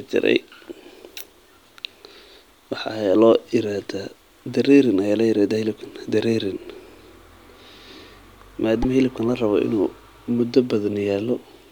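At about 8.82 s there's a quick glitch in the speech, running to roughly 8.85 s. The sound skips forward and that sliver comes out garbled. That's likely a broken MP3 bit reservoir. A chunk of the stream went missing, so the next frame reached back for borrowed data and decoded the wrong bytes. The damage spans about one frame of roughly 26 ms, which is why it's so brief.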